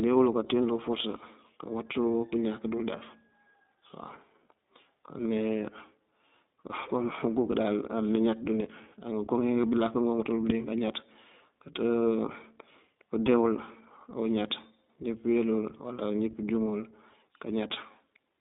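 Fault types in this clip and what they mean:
iLBC codec: The whole speech clip runs through iLBC, a narrowband VoIP codec that codes each 20 ms frame's excitation on its own, without drawing on the previous frame. The line passes roughly 200 Hz to 3.7 kHz, so nothing above that reaches the listener, and at a rate consistent with 15.2 kbps the coding damage is plainly audible as a slightly rough, synthetic edge on the voice.
lost iLBC frames: At 13.66 to 13.69 s, between "këdee wul" and "awuñaţ njí këweel wul", about 20 ms of audio goes missing, consistent with a single lost frame. The decoder fills the gap by repeating the last pitch cycle blended with noise, so it sounds like a brief held, faintly buzzy vowel. Because each iLBC frame stands alone, the voice recovers almost immediately afterwards.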